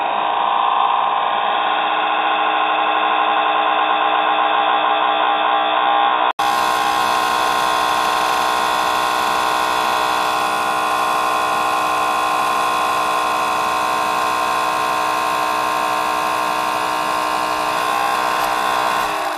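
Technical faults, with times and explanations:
0.00–6.39 s, input switched to a poorer device. Nothing above 3.8 kHz gets through, so the sound is dull and boxy. A faint extra background noise sits underneath. An 80 ms silence comes at 6.39 s, then full clarity returns at similar level. A narrower input was likely active until then.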